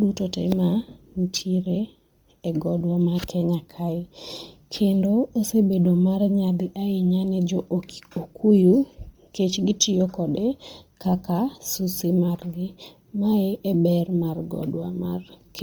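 From the start to 1.61 s, a fine hiss and roughness rides on the speech, strongest on loud and bright sounds and gone in the pauses. This is sample clock jitter: the converter's clock wandered by a few microseconds, so samples landed early or late, leaving error about 30 dB below the signal.

Throughout the clip, the speech has a heavily processed, breathy and grainy edge, with the upper range sounding filled-in rather than detailed, though content still reaches about 20.2 kHz. The likely cause is Bluetooth LC3 compression, which fits 10 ms frames at around 32 kbps.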